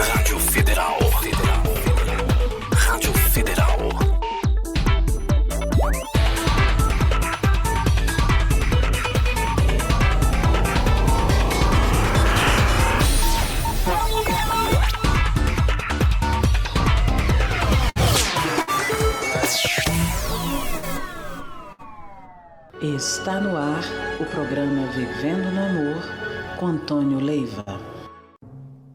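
Five bursts of packet loss break up the audio, at 17.89, 18.62, 20.77, 21.72 and 27.60 s. Each time, roughly 60 ms of sound goes missing. The receiver fills the gap by stretching the last sound for about 50 to 60 ms while fading it down. That shows up as a short held buzz or a dying hiss. The audio then picks up further on, with the stretch in between lost.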